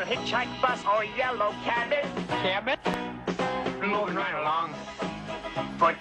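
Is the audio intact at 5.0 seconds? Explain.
Yes, at 5.0 seconds the audio plays through cleanly, with no dropout, click, distortion or other fault at that point.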